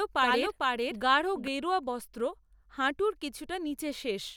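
From the start until 1.48 s, the speech is doubled: an equal-level copy trails by about half a second, dry and full-band, then cuts off abruptly. Likely a second capture path or misaligned edit.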